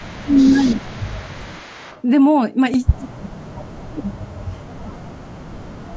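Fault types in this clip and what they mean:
Speech suppressed in double talk: The echo canceller likely mistook the local talker for loudspeaker echo while both sides spoke, so the speech dips by up to about 30 dB in stretches.
Echo leak: A loudspeaker-side echo canceller likely let part of its microphone pickup through, so a copy delayed by 217 ms returns, at most about 20 dB below the speech.
Repeated buffer: Fresh audio arrived late and the last tiny buffer played once more, giving a single brief repeat at 2.74 s that fits a 64-sample buffer.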